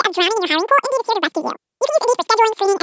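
From start to finish there's a wrong sample rate: the speech runs twice as fast and a full octave high, which fits 8 kHz material being played back at 16 kHz.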